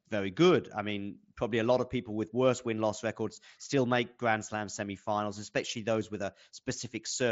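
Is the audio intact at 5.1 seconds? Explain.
Yes, the speech at 5.1 seconds is intact, with no fault at that moment.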